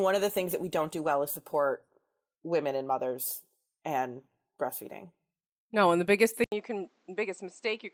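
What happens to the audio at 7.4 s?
The input likely switched to a poorer device at 6.44 s and stayed there to the end. After an 80 ms silence, the speech turns dull with nothing above 8.1 kHz, drops a few decibels in level, and gains faint new background noise.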